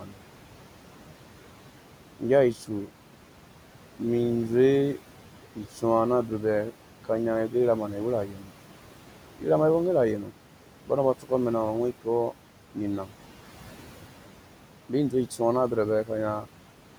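Noise suppressor artifacts run through the whole of this speech recording. The suppressor treats the steady room noise, which sits about 17 dB below the speech, as something to remove, and it pulls those frequency bands down by about 12 dB frame by frame. The background drops away in the gaps and comes back up under the talking. Speech cut by the noise suppressor occurs at 0.0 to 0.15 s, 2.17 to 2.89 s, 5.55 to 13.13 s and 14.89 to 16.48 s. In these stretches the suppressor mistakes quiet parts of the speech for noise and turns them down with the background, by about 11 dB, 12 dB, 12 dB and 10 dB at the deepest. The damage is brief: roughly 150 ms at the start, about 100 ms in the second span, around 0.7 s scattered through the long middle stretch, and about 150 ms near the end. Soft consonants and word endings there sound swallowed or faint.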